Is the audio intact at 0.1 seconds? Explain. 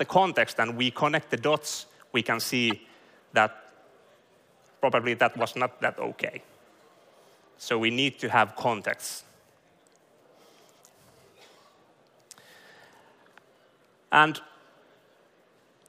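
Yes, at 0.1 s the audio is intact, with no audible fault at that moment.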